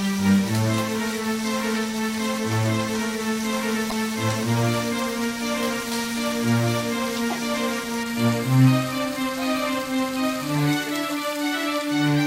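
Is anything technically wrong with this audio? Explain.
Yes. At 3.88 to 3.93 s, damaged data in the compressed stream makes the decoder misread frames and lose sync, giving a brief glitch.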